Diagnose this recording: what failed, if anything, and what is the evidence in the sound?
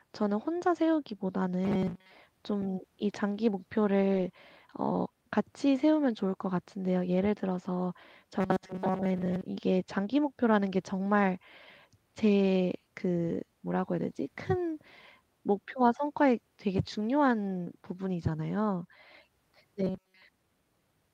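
Robotic sound from repeated short buffers appears at 1.64–2.12 s, 8.41–9.43 s and 19.84–20.22 s. The speech becomes a rigid metallic buzz at 188 Hz, which fits a loop of about 5.3 ms. The likely cause is a driver or buffer stage starved of input that replays its last block. In the first two spans most of the audio is replaced, and in the last nearly all of it. On a spectrogram this shows as flat harmonic lines at 188 Hz and its multiples, and the waveform shows a short repeating cycle.

A lost packet rebuilt from error correction occurs at about 4.13–4.23 s, at the codec and network stage. There is no gap. Instead, about 60 ms of speech turns rougher and noisier, which points to a few lost frames replaced by low-bitrate copies carried in the packets that followed. On a spectrogram that stretch looks smeared, and the waveform stays continuous.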